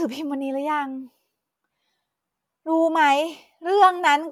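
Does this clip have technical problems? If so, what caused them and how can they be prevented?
No, no technical problems heard.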